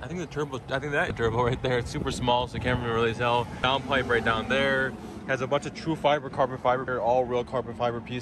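Brief disturbances, each a chirp, squawk, click or short hole, break the audio at 1.07 to 1.11 s, 3.61 to 3.64 s and 6.87 s. This is damaged data in a compressed stream: corrupted bytes make the decoder misread or drop frames, lose sync and hunt for the next frame header.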